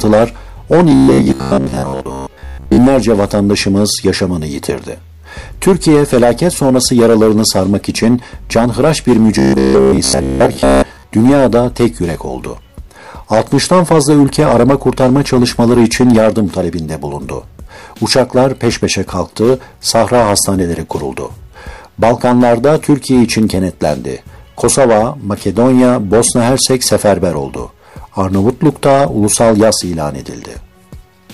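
From 0.92 to 2.79 s, and again from 9.39 to 11.03 s, the audio turns robotic. A rigid, metallic buzz at 66.7 Hz covers most of the sound. This is likely robotic sound from repeated short buffers: a 15 ms segment loops while new audio is skipped.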